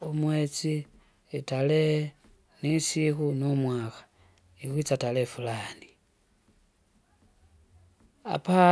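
Nothing goes wrong anywhere in this stretch of speech, so there's no fault to point to.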